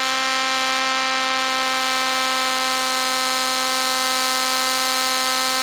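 A DECT cordless phone buzz runs through the whole music clip: a thin, steady 100 Hz tone rich in harmonics, roughly 30 dB below the music. A nearby handset or base transmits a radio burst every 10 ms, which the audio circuitry rectifies into sound.

Also present throughout, the music sounds grainy and rough, with tonal parts turning noisy rather than swirling, and content reaching up to about 20.4 kHz. This is likely Opus compression in its CELT music mode, at a rate that fits roughly 24 kbps. Short of bits, it fills bands with folded or noise-like energy.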